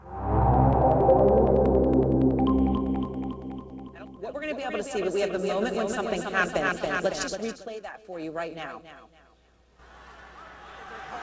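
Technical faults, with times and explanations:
No faults heard; the sound carries the expected character of a wideband call path, with nothing above 8 kHz, which fits G.722 at 64 kbps.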